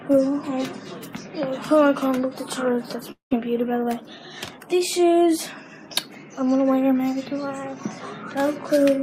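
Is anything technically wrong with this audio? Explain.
Yes. From 3.11 to 3.33 s there is a long network dropout, likely from audio that never arrived, so about 200 ms is lost. The receiver stretches the last sound into a fading buzz, which then gives way to roughly 130 ms of silence before the audio resumes with that portion gone.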